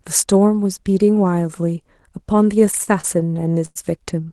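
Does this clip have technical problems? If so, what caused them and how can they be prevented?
Yes. Between 2.59 and 3.77 s the packets reached the receiver late or more slowly than they were played out, so the jitter buffer kept running dry, producing repeated stalls (stutter). Each time, the receiver stretched the last bit of sound, fading it during the longer waits, across fourteen short gaps totalling 267 ms, the longest 100 ms, nearly a quarter of that stretch. Nothing is lost, but the speech drags and judders, heard through the call codec's band limit near 12 kHz. Preventing it means a steadier network path or a jitter buffer allowed to grow deeper when delivery becomes irregular.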